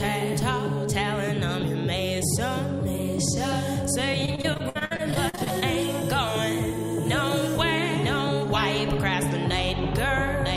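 From 4.25 to 5.63 s there is repeated packet loss (robotic sound). What sounds like around sixteen short dropouts, the longest about 57 ms, are patched by extending the preceding sound. That concealment covers about 27% of the stretch, leaving it choppy, with pieces missing.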